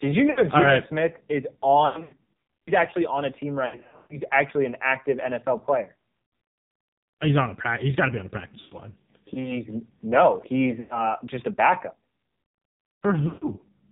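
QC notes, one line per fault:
Throughout: AMR narrowband mobile codec, heavy damage. Nothing passes above 4 kHz. The speech is rebuilt from a vocal-tract model fed with sparse pulses, so it sounds buzzy, synthetic and thin, which fits a low AMR-NB mode around 5.9 kbps. On a spectrogram the energy stops sharply at 4 kHz, and the harmonics look smeared and grainy.
0.32–0.42 s, 1.86–2.76 s, 3.66–4.21 s, 6.22–6.32 s, 8.60–8.77 s, 10.80–11.11 s, 13.28–13.47 s: lost AMR speech frames. At each point the decoder repeats the last good pitch and spectral settings at falling gain. The result is a warble or drawn-out sound that fades, then returns rough. The 1.86 s stretch has gaps scattered over 0.8 s, the longest about 100 ms. The 3.66 s stretch has gaps scattered over 0.44 s, the longest 140 ms. On a spectrogram these show as frozen, repeated harmonic bands. On the waveform they show as decaying envelope dips.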